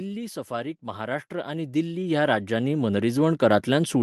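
From 0.47 s to the end, automatic gain rising: the gain control judged the input too quiet and kept raising its gain, so speech and background swell together.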